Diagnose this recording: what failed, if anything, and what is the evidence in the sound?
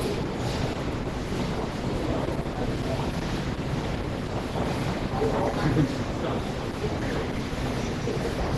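Opus compression throughout, at the codec stage: the sound is heavily degraded, muffled and hoarse with nothing above 12 kHz, likely Opus hybrid mode at a bitrate near 12 kbps.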